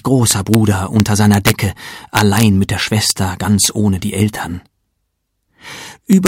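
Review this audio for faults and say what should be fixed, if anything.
Integer overflow produces sharp cracks at 0.31–0.55 s, 1.0–1.5 s, 2.17–2.43 s, 3.10 s, 3.65 s and 6.13–6.27 s. Peaks driven about 1–4 dB past full scale wrap to the opposite sign instead of being held at the limit, flipping across the whole range. Fix this by using saturating arithmetic or a limiter ahead of the integer conversion.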